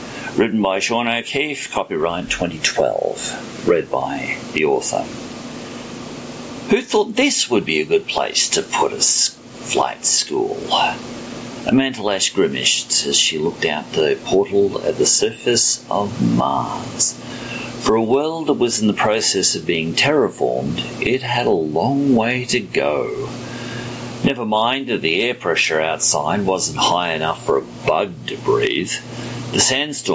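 Gain pumping runs through the whole clip: the level breathes up and down, a swing of roughly 25 dB. This most likely comes from the input gain being set far too high, so a fast limiter or compressor clamps down on every peak and releases in between. Loud and quiet passages sit squashed close together, and the call's band-limiting leaves nothing above 8 kHz.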